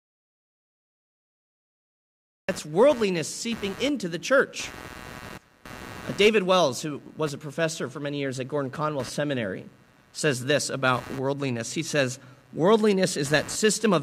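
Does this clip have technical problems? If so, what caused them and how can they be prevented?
Yes. From the start until 2.49 s there is an audio dropout to silence: silence with no room tone, likely from a lost input link, ending at "worldliness seeping into the". Prevent it by securing connections and monitoring input before recording.

Computer activity noise runs throughout as a buzzy chirping near 150 Hz, roughly 20 dB below the speech, caused by processor, graphics card or mouse load modulating shared ground. Prevent it with a ground-isolated or external audio interface.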